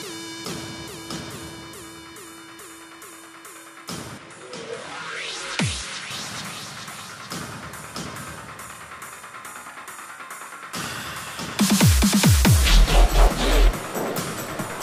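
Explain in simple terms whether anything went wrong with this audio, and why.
From 4.18 to 6.11 s, the sound turns duller, quieter and hissier, then clears again. The likely cause is an input switched to a poorer device.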